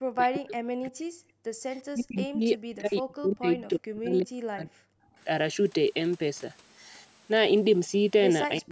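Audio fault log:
0.00–1.34 s, 1.91–4.98 s and 8.59 s to the end: speech suppressed in double talk. In each stretch the talker's level sinks steeply, by about 40 dB at its deepest. This is likely an echo canceller that heard both sides at once, could not tell this talker from its own loudspeaker echo, and turned everything down. Unlike a network dropout, the cuts follow the far side talking over this talker rather than falling as abrupt digital gaps.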